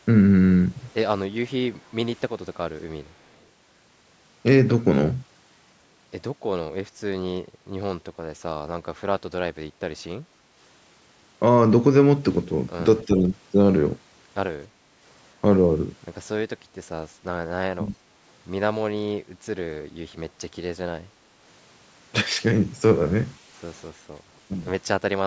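At 10.27 to 10.45 s the background is gated by the echo canceller. While the far-end loudspeaker plays, the canceller turns the microphone down by about 6 dB for roughly a sixth of a second, so the room tone briefly sinks and comes back. On a waveform the noise floor shows a short notch. On a spectrogram the broadband haze thins across all bands at once, up to the 8 kHz ceiling left by the call's microphone processing.

From 13.05 to 13.27 s the speech itself dips by about 5 dB for around a fifth of a second. This is likely speech suppressed in double talk: both sides were talking, and the canceller could not tell this talker from the loudspeaker echo, so it attenuated everything. The waveform envelope narrows, and the spectrogram's harmonics fade. The same thing happens harder at 17.76 to 17.96 s, about 15 dB down, where the sound audibly drops and comes back.

At 23.95 to 24.08 s the background is gated by the echo canceller a second time, about 7 dB down for roughly 150 ms. 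It shows as another brief gap in the room noise, with the spectral haze dimming evenly.

Likely double-talk suppression returns in two short bursts. At 24.48 to 24.52 s the speech drops about 10 dB for some 40 ms, a quick flutter that appears as a pinched spot in the envelope. From 25.23 s to the end it falls about 30 dB, nearly cutting out. The spectrogram goes almost blank there, and the waveform collapses toward silence.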